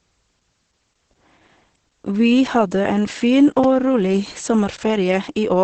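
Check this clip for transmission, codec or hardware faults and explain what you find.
Two faults are present: heavy codec damage throughout, and two brief dropouts.

Throughout, the speech sounds muffled, hoarse and faintly robotic, with nothing above about 8.6 kHz. This is Opus voice compression in its SILK linear-prediction mode at wideband, with a coarsely coded excitation that fits a low bitrate of around 10 kbps.

At 3.64 s, just after "hadde en fin", a 5 ms block of digital silence gives a tick. From 4.77 to 4.79 s, a 20 ms block gives a short hole. In each case the sound cuts out and back with no fade, probably because the output buffer wasn't filled in time.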